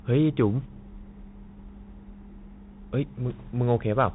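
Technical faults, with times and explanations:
Throughout, Bluetooth CVSD headset codec: the speech sounds boxed in and narrowband, with nothing above about 3.8 kHz, scratchy s sounds and a granular hiss underneath. A one-bit up-or-down coder with adaptive step size, consistent with a 64 kbps headset link, cannot track fast high-frequency movement.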